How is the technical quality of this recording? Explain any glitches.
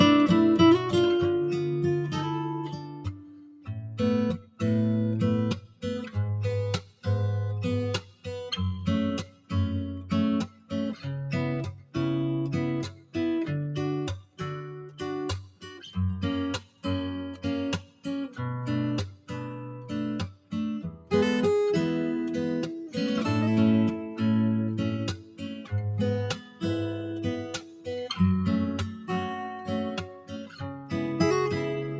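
The quality suffers from a speech-style noise suppressor that shouldn't be on this material.

For the whole clip, the noise suppressor applied to music or sounds keeps nudging the level around, with swings of roughly 10 dB. It's built to tell speech from background, so anything steady, like sustained tones, ambience or reverb, gets mistaken for noise and pulled down. You hear that as pumping and a thin, fluttery texture, with attacks coming through while whatever follows them sinks.

There are two stretches of sound cut by the noise suppressor. The first runs from 1.5 to 21.11 s, and the second from 25.16 to 30.93 s. The suppressor clamps down hardest in these spans, taking up to about 10 dB off in places. Several seconds of the first span are affected and a couple of seconds of the second. Held sounds and decays drop away or get their tails chopped short, while sudden hits mostly survive.

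The band stops around 8 kHz, which fits normal call microphone processing.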